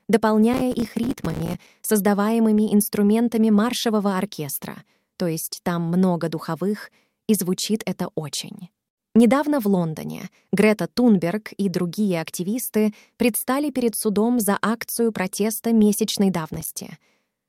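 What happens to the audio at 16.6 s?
Processor overload crackle runs from 16.54 to 16.79 s, just after "за акцию протеста месячной". The processor repeatedly misses its deadlines for buffers of roughly 5 ms, around ten of them, and each missed one drops out as a short hard-edged silence, so the speech tears into a gritty burst of crackle.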